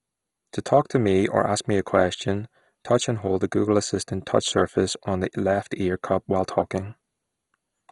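Speech throughout shows MP2 compression damage: the sound is dull and gurgling with granular distortion, and nothing survives above 11.2 kHz, which fits a heavily starved bitrate near 56 kbps. A spectrogram shows a hard ceiling there, with upper sub-bands flickering on and off, likely from MPEG Layer II encoding.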